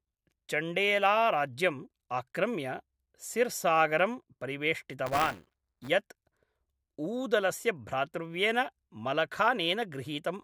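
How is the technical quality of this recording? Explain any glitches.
One glitch affects the speech. From 5.06 to 5.89 s, buffer tearing occurs: the writing program and the playback hardware slip, so part of each buffer holds a small slice of audio roughly 15 ms old, giving a robotic 200 Hz buzz.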